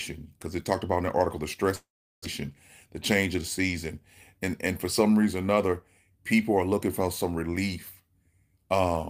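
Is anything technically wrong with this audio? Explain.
Yes, there are two faults. From 1.75 to 2.26 s the sound smears into a fading buzz, then goes silent for about 0.37 s and resumes with roughly 0.4 s missing. This is likely a long network dropout, with the receiver concealing the gap before giving up.

From 2.86 to 3.73 s the speech runs hurried at the same pitch, about 107% speed. This is a jitter buffer speed-up: after the backlog, the receiver trimmed short pitch-period pieces, roughly 70 ms in total, to reduce delay.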